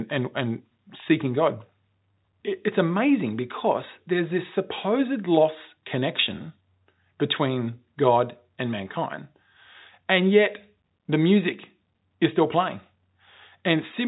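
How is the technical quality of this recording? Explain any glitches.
The speech carries no glitches or dropouts; it sounds like a fixed-line telephone call in G.711 mu-law, which fits a 64 kbps stream, with nothing above 3.9 kHz and at most a faint level-following quantisation hiss, and the call's microphone processing has trimmed the lowest bass as it should.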